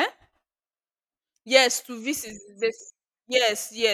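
Something in the system is blocking the USB bus or audio driver on a fixed schedule, causing periodic USB or driver dropouts in this speech recording. From 2.3 s to about 3.8 s, roughly every 0.5 s, around a millisecond of audio is lost and replaced with silence, about four times in all. Each tiny gap cuts the waveform abruptly, so the speech carries small, evenly spaced ticks that sound only while the voice is present.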